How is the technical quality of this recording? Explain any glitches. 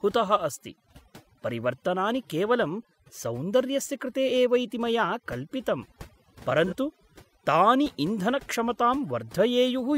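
The technical quality is compromised by two faults: heavy processing across the whole speech recording and one brief dropout.

Overdone noise removal runs throughout. The noise reduction was set too aggressively, so any frequency band close to its noise estimate is pulled far down or muted, and the quieter components of the speech are cut along with it. The background drops and breaks up into twinkling, chirpy specks.

AAC frame loss with concealment occurs from 6.67 to 6.74 s. The gap is about 43 ms, which fits a single lost AAC frame. The decoder filled the hole by reusing the last good spectrum rather than leaving silence. Because the loss is short, there is no fade-out. What you hear is a brief smeared, noisy or phasey patch where the speech loses its detail for an instant before clean decoding resumes.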